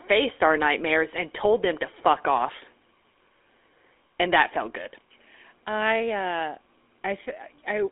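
From start to finish the speech runs through a GSM full-rate codec. The band sits between 300 Hz and 3.5 kHz with nothing above 3.8 kHz, which fits a 13 kbps stream, and the sparse pulse excitation leaves a plainly audible buzzy, gravelly roughness.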